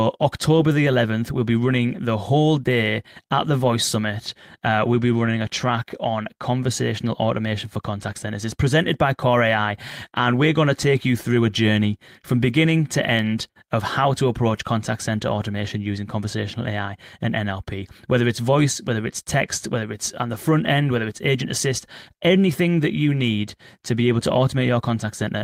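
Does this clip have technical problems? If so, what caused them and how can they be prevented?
No, there are no technical faults to be heard anywhere in this speech recording. With nothing having gone wrong, there is no cause to trace and nothing that needs preventing.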